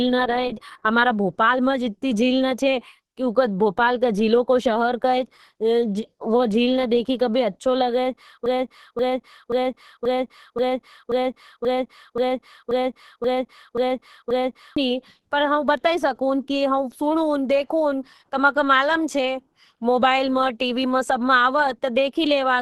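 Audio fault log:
throughout, Opus compression: the sound is muffled and hoarse, with nothing above about 12.1 kHz, as when the encoder drops into its hybrid speech mode. This likely comes from Opus at a low rate, pointing to around 16 kbps, where bandwidth narrows and detail is lost.
8.46–14.77 s, broken-record loop: a 0.53 s fragment repeats exactly, back to back, 12 times, and the speech that belonged in those six seconds never arrives. A stalled player or stream is likely, resending the last piece it held until data resumed.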